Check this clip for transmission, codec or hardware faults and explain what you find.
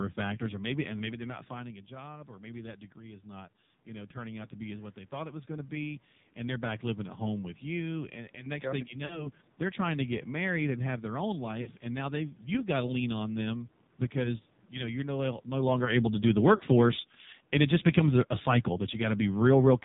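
Three faults are present in this speech recording: heavy narrowband mobile codec coding throughout, three short bursts of lost AMR speech frames, and an automatic gain drop near the end.

The AMR narrowband mobile codec colours the whole clip. Nothing above 4 kHz survives, and the speech has a buzzy, synthetic edge. That points to a low mode around 5.9 kbps, where a few pulses per subframe drive a vocal-tract model. The room noise swirls and warbles rather than hissing, which marks this as codec damage rather than simple band-limiting.

Lost AMR speech frames occur at 9.06 to 9.30 s, 11.62 to 11.71 s and 16.56 to 16.63 s. Each sounds like a brief smeared warble and dip, consistent with two failed 20 ms frames that the decoder covered by repeating its last pitch and filter settings at falling gain. A clean dropout or click would sound abrupt instead.

Automatic gain falling runs from 15.54 s to 19.8 s, lowering the level by about 6 dB. 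The speech and its background noise sink together and gradually. That tells it apart from the talker shifting position around 15 s, which changes the voice level but leaves the room noise unchanged.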